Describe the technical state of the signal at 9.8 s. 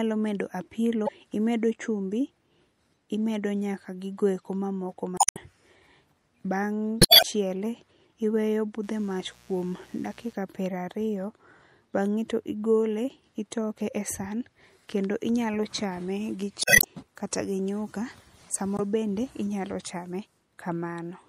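A steady, raspy buzz sits about 30 dB under the speech from 8.83 to 10.33 s: mains buzz, where switching spikes at twice every 60 Hz cycle leak in as harmonics.

The speech also sounds watery and swirly, with smeared attacks, likely from MP3 compression starved of bits, consistent with a bitrate around 64 kbps.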